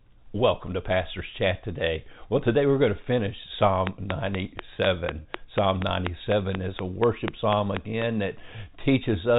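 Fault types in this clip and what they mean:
Train of clicks: a steady ticking of about 4.1 clicks per second, some twenty in all, standing roughly 20 dB above the speech, likely interference from nearby equipment.
Packet loss with pitch repetition: a brief held, buzzy note near 5.22 s, where one lost 30 ms stretch of audio was bridged by repeating the last pitch period.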